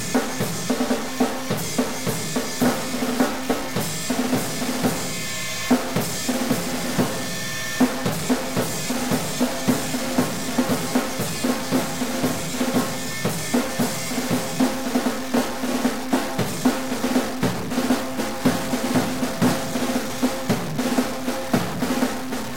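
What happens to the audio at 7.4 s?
At 7.4 s a stuck bit is heard, as it is through the whole clip. The sound is harsh and buzzy. Pauses fill with noise at about -25 dBFS. This is likely one data bit held fixed, so about half the sample values are shifted by that bit's weight.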